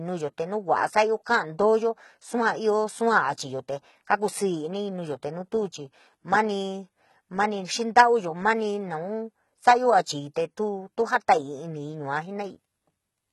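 Throughout, likely heavy HE-AAC compression rebuilds the treble from copied lower bands, leaving s sounds gritty and metallic and nothing above 11.8 kHz.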